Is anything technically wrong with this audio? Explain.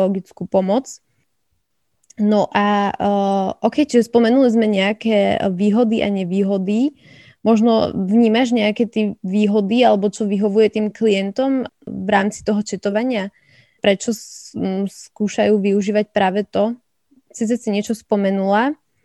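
Yes. From 12.90 to 12.92 s there is a corrupt frame decoded: flipped bits in what sounds like a few compressed frames were decoded anyway. Misread gains and codes put energy at wrong frequencies, giving a brief chirp-like burst peaking around -20 dBFS over the speech.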